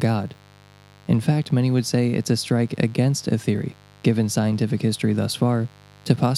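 From start to finish, a mains buzz sits under the speech, some 30 dB below it. Sharp switching spikes from a dimmer, rectifier or unshielded lead have entered the chain, two per 50 Hz cycle, so the interference repeats 100 times a second. Its harmonics of 50 Hz climb into several kHz, which gives a raspy, edgy texture. A plain hum would be a smooth, low drone confined to 50 and 100 Hz.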